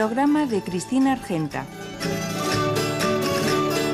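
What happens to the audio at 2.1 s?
At 2.1 s the audio carries the same dull, gurgling, granular distortion heard across the whole clip, which is likely MP2 compression. MPEG Layer II divides the spectrum into 32 equal sub-bands and shares a bit budget among them. At a rate that points to roughly 80 kbps, too few bits reach the upper bands, so they drop out and flicker, and the remaining bands are coarsely quantised. The damage is plainly audible.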